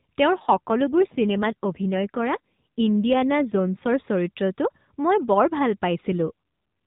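From 0.32 to 3.92 s the speech turns rougher and more synthetic. This is an AMR rate drop. The mobile codec has fallen to a lower mode. The roughness fits a step down from 12.2 to about 5.9 kbps. The band stays the same and there is no gap. With fewer bits for each frame, the voice turns buzzy. The same drop returns briefly, from 6.12 to 6.32 s. Then the steadier 12.2 kbps sound comes back.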